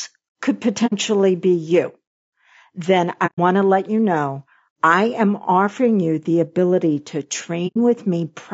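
Throughout, the speech sounds rough and grainy, with noise between the harmonics. This is likely low-delay AAC compression (AAC-ELD), at a rate that fits about 32 kbps. AAC frame loss with muting then leaves soft-edged holes at 0.86–0.93 s, 3.26–3.39 s and 7.67–7.77 s, where the decoder zeroed the missing frames and faded across them.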